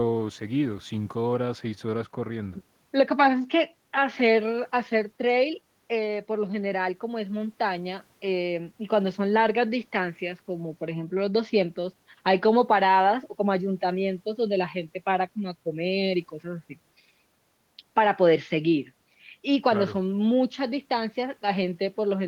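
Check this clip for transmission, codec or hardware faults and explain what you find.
Nothing audible in the recording points to a fault anywhere along the signal path.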